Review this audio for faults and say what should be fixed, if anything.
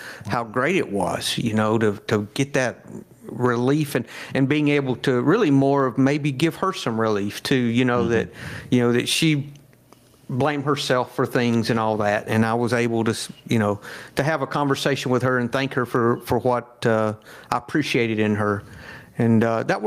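Gain pumping throughout: the speech level swings by about 15 dB, likely from input gain set too high with a fast limiter pulling down each loud sound. Set the microphone gain lower so the limiter seldom has to act.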